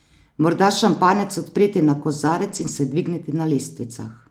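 From 2.47 to 2.69 s the speech turns briefly rough and noisy without dropping out. This is a lost packet rebuilt from error correction. Several separate packets went missing, and the decoder filled about 120 ms with the lower-bitrate copies carried in the packets that followed, which fits roughly six separately lost packets. On a spectrogram the energy stays continuous, but harmonics look smeared and grainy with more diffuse noise between them. The waveform shows no gap.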